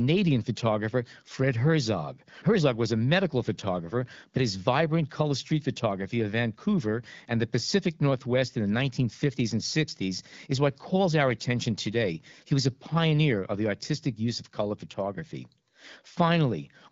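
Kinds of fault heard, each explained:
No faults are heard anywhere in this speech.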